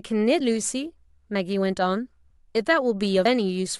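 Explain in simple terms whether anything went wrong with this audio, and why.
The speech skips twice, at 1.35 s and 3.25 s, where a small piece of about a twentieth of a second vanishes and the sound jumps straight ahead. This is audio missing between chunks, likely because the recorder worked in one-second pieces and dropped a sliver while switching between them.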